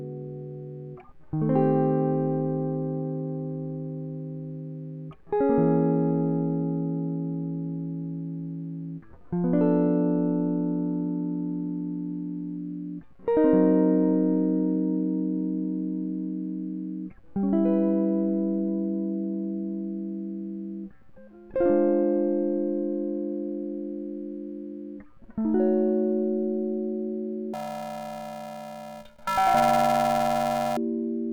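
Music, where from 27.53 to 30.77 s planar audio read as interleaved turns the sound into a robotic buzz at 375 Hz, which fits 128-sample blocks of 2.67 ms. On a spectrogram this shows as harmonic bands spaced 375 Hz apart.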